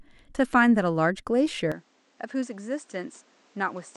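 At 1.72 s the speech abruptly turns duller and drops by about 5 dB, with no gap at the change, and stays that way to the end. Nothing remains above 8.8 kHz, and a new noise floor sits roughly 30 dB below the speech. The likely cause is an input switched to a poorer device partway through.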